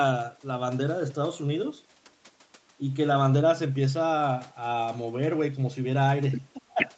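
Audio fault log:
6.61 to 6.8 s, speech suppressed in double talk: near the very end, the talker briefly loses level, with the deepest dip around 15 dB and only a small part of that span, on the order of 70 ms, actually pulled down. The likely cause is an echo canceller hearing both sides at once and, unable to separate the near talker from loudspeaker echo, ducking everything together.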